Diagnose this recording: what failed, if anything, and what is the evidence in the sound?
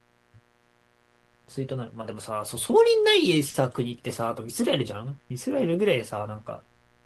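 A steady raspy buzz sits well below the speech throughout: mains buzz at the analogue wiring, where switching spikes inject 60 Hz harmonics reaching several kHz.

At 3.49 to 3.57 s one sound is held too long: a short stall from a late packet. The network jitter buffer ran dry, the receiver stretched sound for 50 ms, and nothing was lost.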